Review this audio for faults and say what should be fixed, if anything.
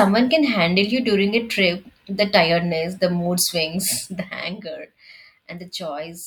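Zipper noise shows up in the speech from 3.88 s to 4.76 s, a ticking that rides along while the level drops by roughly 10 dB. The gain is being moved in coarse jumps, around twenty a second, with no smoothing between them, so each jump leaves a tiny click and together they buzz like a zip. It's just this one. To prevent it, ramp gain per sample or interpolate across each buffer instead of stepping it.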